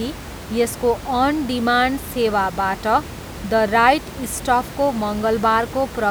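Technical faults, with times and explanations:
No technical faults found in this speech clip; the room noise sits about 14 dB below the speech and belongs to the recording itself.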